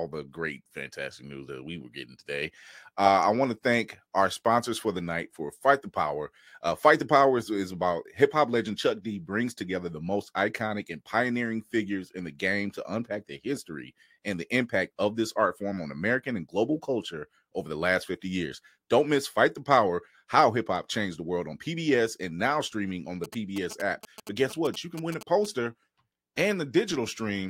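GSM signalling bursts, 23.24 to 25.46 s, right after "now streaming on the": a nearby 2G phone's radio bursts, rectified by the audio circuit, gallop as a dit-dit-dit of short 217 Hz buzzes, well below the speech.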